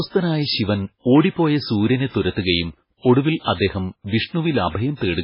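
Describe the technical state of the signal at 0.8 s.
Likely heavy MP3 compression, running throughout, starves the encoder of bits, which fits roughly 16 kbps: nothing survives above 5.3 kHz, and flickering spectral lines make the speech watery, with dulled, swirly s sounds.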